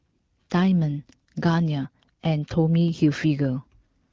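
The speech comes through an AMR wideband (HD Voice) link at 12.65 kbit/s, a rate at which this codec keeps speech clear, and no technical fault can be heard at any point in the audio.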